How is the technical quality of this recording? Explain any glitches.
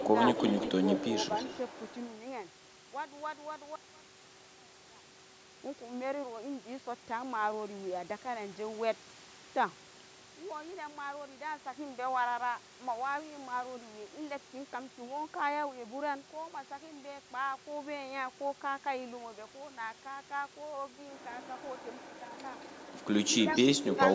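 The recording has two kinds of glitches: echo leaks at the start and end, and a stretch where the speech nearly vanishes because one channel is inverted. The call microphone processing is also audible as a band limit, with nothing above 8 kHz.

Echo leak: A delayed copy of the speech trails the talker at 0.00–0.04, 0.25–1.05, 1.26–2.11, 21.42–21.85, 22.38–23.02, 23.32–23.67 and 23.84–24.15 s. The lag is about 166–170 ms early on and grows to about 213–219 ms near the end. It's likely a loudspeaker on the far end whose echo canceller let some of its mic pickup slip back into the call. The echo is fairly strong around 0.25–1.05 s and near the very end, and much fainter in between.

One channel inverted: From 3.76 to 5.40 s the level drops by about 30 dB, and the speech turns into a faint ghost of itself. One stereo channel has likely had its polarity flipped. When the two channels are summed to mono, everything common to both cancels, including the centred speech and the background. 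Only the small differences between the channels remain.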